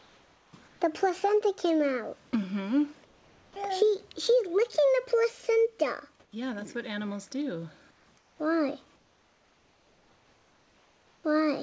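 At 0.00–0.53, 0.68–0.80, 3.05–3.56, 6.20–6.32, 7.91–8.06, 8.18–8.39 and 8.96–11.24 s, the pauses carry comfort noise in place of the background, likely from discontinuous transmission. The real background is swapped for a steady, featureless hiss, about 2 to 5 dB quieter except at 6.20 s, where it is about 2 dB louder. Unlike a noise gate or dropout, the pauses never fall to silence. Like everything else, the hiss stops at 8 kHz.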